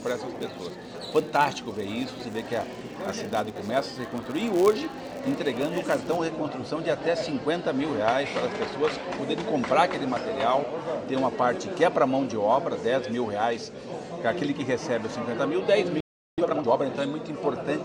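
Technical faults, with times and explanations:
0.0–6.18 s, filter restarted on every block: a filter loses its state at each block boundary and starts again from silence, so each block opens with a small transient. The result is a 100 Hz buzz that rises and falls with the signal's level. On a spectrogram it shows as harmonics spaced every 100 Hz, and the waveform has regular spikes every 10 ms.
16.00–16.38 s, playback stall: the sound stops in mid-flow for about 375 ms. The likely cause is a player that ran out of data or a blocked playback thread, so output went silent until it recovered. The waveform is a flat gap and the spectrogram shows a blank vertical band.
16.38–16.74 s, time-compressed catch-up: right after the gap the audio runs at twice normal speed without any change in pitch, which makes it sound hurried. Small pieces are cut out and cross-faded to clear the backlog. On the waveform the events crowd together, and the spectrogram shows short discontinuities at the splices.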